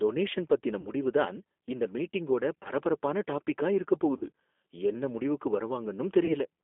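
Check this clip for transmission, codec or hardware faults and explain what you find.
Yes, there are two kinds of fault: G.729 coding throughout and four concealed packet losses.

G.729 codec (whole clip): The speech is rebuilt from filter, pitch and pulse parameters at a rate that points to 8 kbit/s G.729A. It sounds plainly rough and synthetic. A spectrogram shows energy only between about 250 Hz and 3.5 kHz.

VoIP packet loss concealed by the speech codec (0.81–0.89 s after "டொனேஷன் பத்தின", 2.63–2.71 s before "டாபிக்கா இருக்கப்", 4.17–4.25 s after "டாபிக்கா இருக்கப்", 6.25–6.36 s): About 40 ms is missing at each point except 2.63 s, where about 20 ms is missing. These gaps fit two lost packets, or one at 2.63 s. In each gap the decoder extends the last pitch and filter and lowers the gain, so the sound turns into a brief fading buzzy tone or coloured noise. The waveform shows a decaying stretch there.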